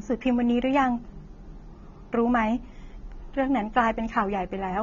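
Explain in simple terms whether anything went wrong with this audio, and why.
The speech was likely passed through strong AAC compression, which discards detail to save space. From start to finish, nothing survives above about 6.9 kHz, so the speech sounds dull and muffled, with a smeared, warbling fizz clearly audible on sustained sounds and hissy consonants.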